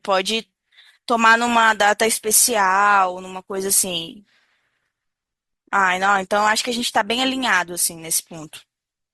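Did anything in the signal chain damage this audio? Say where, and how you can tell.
Yes. At the network and codec stage, the adaptive stream switched to a lower bitrate from 1.47 s to the end of the clip. Bandwidth apparently dropped, so the player switched to a leaner encoding of the same speech without interrupting playback. The change is abrupt and gapless, and codec artefacts thicken. That fits an Opus stream falling from roughly 64 to 24 kbit/s.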